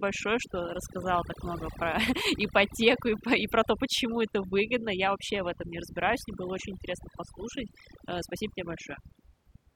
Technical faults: overdone noise removal

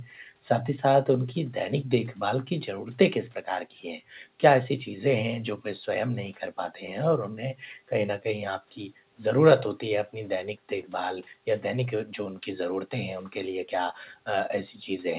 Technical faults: background gated by the echo canceller; echo leak

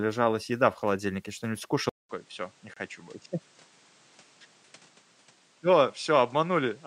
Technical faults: input switched to a poorer device; gap between stream segments

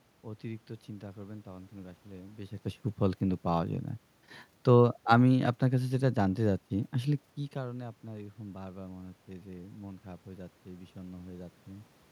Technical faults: none

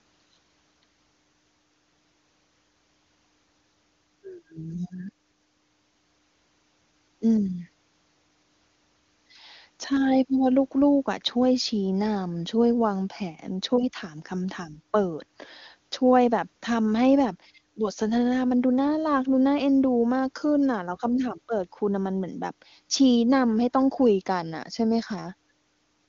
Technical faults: none

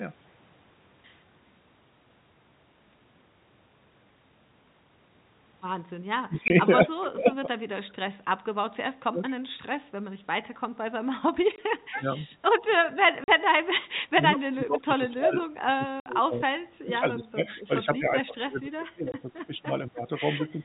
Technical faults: speech suppressed in double talk; packet loss filled with silence; echo leak

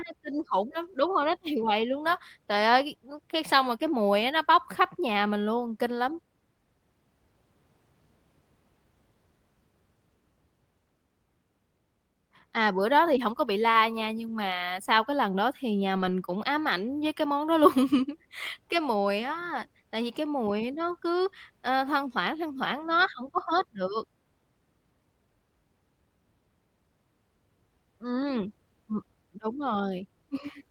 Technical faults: lost packet rebuilt from error correction

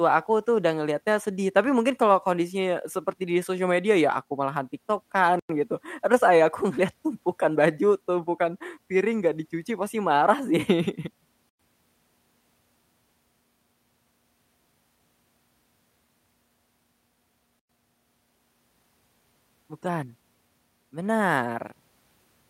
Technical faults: gap between chunks

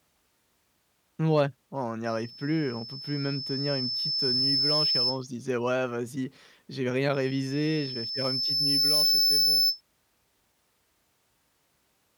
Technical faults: loudspeaker feedback squeal

